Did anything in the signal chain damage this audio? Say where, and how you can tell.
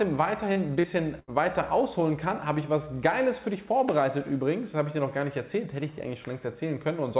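Yes, in the network stage of the call. Twice, at 0.52 to 0.59 s and again at 0.80 to 0.86 s, the sound briefly smears and wobbles, as if it were being stretched for a moment before blending back. That is short concealed packet loss. Roughly 40 ms of audio failed to reach the decoder in time. The receiver covered each gap with about 35 to 38 ms of continued signal, then crossfaded back into the real audio.

From 1.19 to 1.31 s a longer stretch turns into a held, fading continuation of the preceding sound, and the audio then resumes further along with a piece skipped. This is a burst of packet loss: about 80 ms went missing in one run. The concealment extended the last sound for about 82 ms, lowering it as the gap went on, and nothing of the lost section itself is recovered. The G.711 A-law call path limits everything to below 4 kHz, which is expected for that codec.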